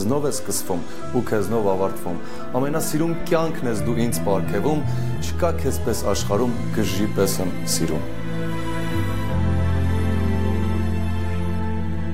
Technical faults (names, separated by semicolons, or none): DC offset